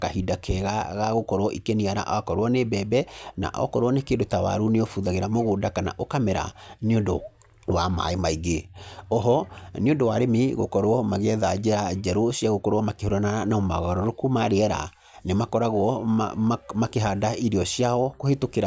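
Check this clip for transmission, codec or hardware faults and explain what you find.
Nothing in the speech signal points to a fault; the audio stays continuous and stable throughout.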